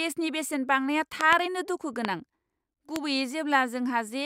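Loud pops at 1.21–1.35 s, just after "बेसेन बांनाया", as a quick double pop, then single pops at 2.05–2.07 s and 2.96–2.98 s, each roughly 20 dB above the speech. These are likely voltage spikes from a switch, static or driver glitch, heard as sharp thumps while the speech continues underneath.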